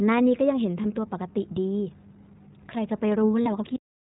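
A short speech recording is carried throughout by the iLBC codec, and the coding damage is plainly audible: the voice sounds clear but rough and slightly synthetic, with a thin, boxy character because nothing above 4 kHz survives. On a spectrogram the whole clip shows a hard ceiling at 4 kHz with empty space above it. The rough texture fits iLBC's 15.2 kbps mode with 20 ms frames, each coded independently of the one before. Two dropouts are lost iLBC frames. The first runs from about 0.82 to 0.85 s, a gap that fits a single lost 20 ms frame. The second runs from about 3.42 to 3.48 s, which fits two lost frames, or 40 ms. In each gap the decoder fills in by repeating the last pitch cycle blended with noise, so the listener hears a brief held, buzzy or breathy vowel sound rather than silence. On a waveform this shows as a short run of near-identical repeating periods. On a spectrogram it shows as a stretch of frozen, evenly spaced harmonic lines, smeared with some noise. 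Because each frame stands alone, the voice snaps back to normal immediately after both losses. Finally, the clip has a cut-off end at 3.76 s. The sound stops abruptly mid-utterance and drops straight to digital silence with no natural decay, because the final buffers were never written out. The waveform goes from active signal to a dead flat line in an instant, and the spectrogram ends in a clean vertical edge followed by blank space.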